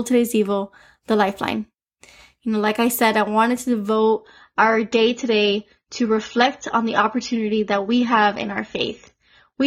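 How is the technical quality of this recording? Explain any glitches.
The recording starts clean but degrades partway through. From 3.96 s to the end, an adaptive stream at a lower bitrate takes over: the treble abruptly vanishes above 7 kHz and codec artefacts thicken, with no gap. This fits a switch from around 96 to 24 kbit/s AAC. On a spectrogram, the upper band is cut off sharply at that moment.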